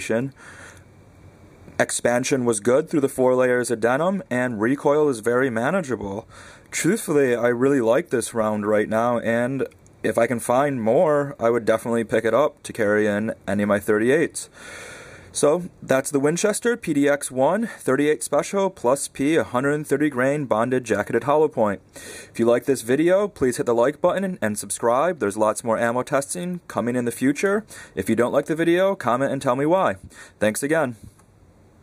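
Listening through this recording, nothing stood out as a technical problem at any point.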